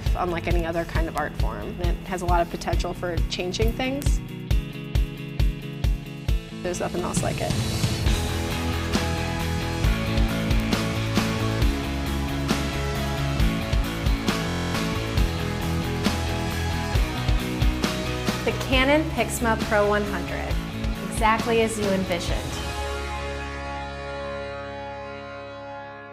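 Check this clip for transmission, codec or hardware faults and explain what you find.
Two kinds of fault are present: four bit error spikes and one system hang loop.

Bit error spikes at 1.18, 4.02, 10.6 and 22.12 s: a single flipped bit in memory or on a digital link pushed one sample (two in a row at 1.18 s) away by a power of two before it snapped back. Each is heard as one sharp, broadband tick unrelated to the surrounding sound.

System hang loop from 14.49 to 14.75 s: the system stalled while the sound hardware kept replaying its ring buffer, so one 23.22 ms slice repeated 11 times, which fits a 1024-sample buffer. It is heard as a steady buzz at 43.1 Hz, and about 0.3 s of audio is lost.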